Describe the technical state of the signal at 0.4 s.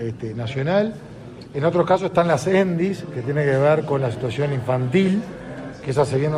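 The signal at 0.4 s is intact, with no audible fault at that moment.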